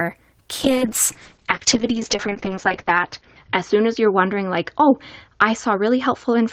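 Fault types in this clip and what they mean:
Call bitrate drop: From 0.64 s the speech turns coarse and rough until the end. The encoder has far fewer bits to work with. Content above 8 kHz is cut away, dulling the sound. This points to a fall from 32 kbps to about 7 kbps.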